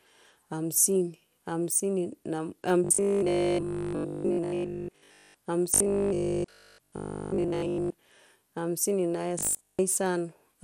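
From the start, the whole speech clip carries MP2 compression damage. It is plainly audible. The sound is dull and gurgling, with a grainy edge on the voice. Nothing is present above 17.3 kHz. This fits MPEG Layer II at a low rate, around 80 kbps. Too few bits are spread across its sub-bands. The top bands drop out, and the rest are quantised coarsely.

From 2.84 to 5.34 s, robotic sound from repeated short buffers takes over. It returns from 5.74 to 7.94 s, and again from 9.39 to 9.79 s, just after "hamsini na". The voice turns into a rigid, metallic buzz at 50 Hz. That fits a 20 ms chunk being replayed. The likely cause is audio arriving too late, so the last buffer is repeated to fill the gap. Most of the real audio in these stretches is lost.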